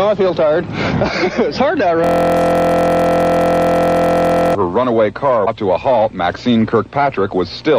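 From 2.04 to 4.55 s there is a system hang loop. The machine or driver froze while the audio hardware kept replaying its ring buffer. A 23.22 ms piece repeats about a hundred times, fitting a 1024-sample buffer. It sounds like a steady 43.1 Hz buzz.

At 5.42 to 5.48 s, damaged data in a compressed stream causes a brief blip. Some of the encoded bytes there were corrupt. The decoder misread or rejected those frames and lost sync. It then hunted for the next valid frame header.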